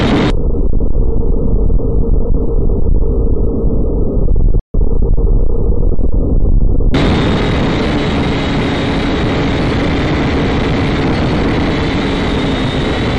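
A playback stall at 4.59 s cuts the audio to silence for about 145 ms, likely because the player ran short of data or its thread was blocked.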